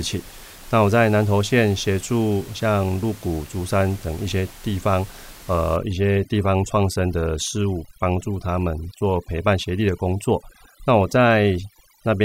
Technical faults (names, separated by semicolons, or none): overdone noise removal